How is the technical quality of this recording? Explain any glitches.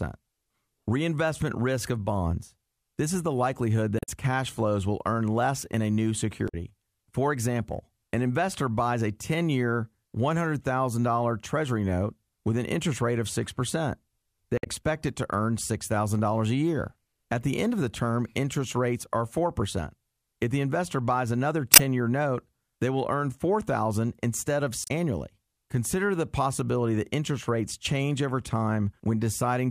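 The recording has five short glitches, all of the same kind. Damaged data in a compressed stream occurs at 3.96–4.09 s, 6.45–6.54 s, 14.55–14.67 s, 21.73–21.80 s and 24.82–24.91 s. Each lasts roughly 70 to 130 ms. Corrupted bytes in the encoded speech make the decoder misread those frames and lose sync until it finds a valid frame header again. The result is a brief chirp or squawk in place of the speech. At 14.55 s the event also adds about 26 ms of extra time.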